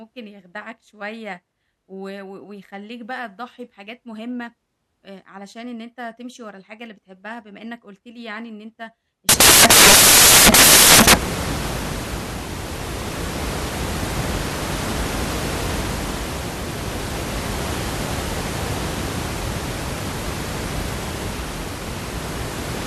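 Speech runs cleanly until about 9.29 s, where it collapses into samples built from the wrong bytes and stays that way to the end. The reader is assembling each sample with its bytes misordered or misaligned, so the jittery low bits land on top. You hear loud, harsh broadband noise, close to white on the louder sounds.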